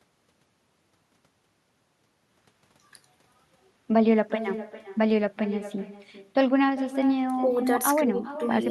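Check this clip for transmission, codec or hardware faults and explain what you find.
One fault runs through the whole recording: echo with no canceller. Every phrase of the speech is shadowed about 400 ms later by a thinner copy, about 13 dB quieter. The far end's loudspeaker feeds its microphone, and nothing subtracts that returning signal before it travels back.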